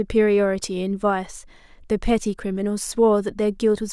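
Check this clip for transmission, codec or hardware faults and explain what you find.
Nothing in this speech sounds off to me, so there isn't a fault to walk through.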